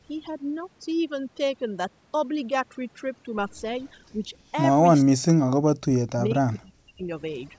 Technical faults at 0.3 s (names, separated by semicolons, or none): overdone noise removal